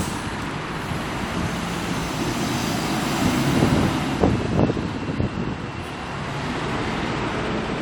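No technical faults can be heard anywhere in this recording.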